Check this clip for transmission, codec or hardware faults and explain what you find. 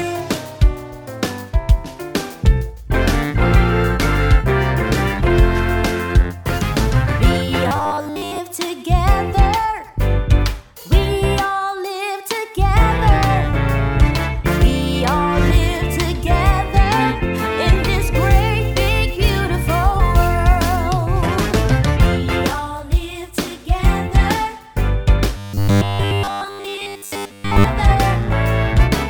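Two stretches of robotic sound from repeated short buffers occur, at 7.68 to 8.40 s and 25.37 to 27.64 s. The audio turns into a rigid, metallic buzz at 100 Hz that loosely tracks the sound. The likely cause is a 10 ms chunk replayed repeatedly while fresh data was late, so most of the real audio in those spans is skipped.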